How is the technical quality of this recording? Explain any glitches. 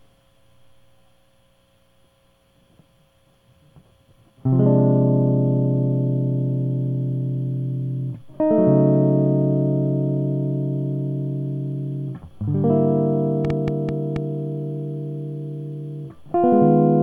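The recording has one glitch, a short train of clicks in the music from 13.45 to 14.17 s. The likely cause is outside interference or a faulty connection or power supply, injecting a pulse at an uneven pace of about 5.6 per second. That produces roughly five similar pops standing out around 10 dB above the music.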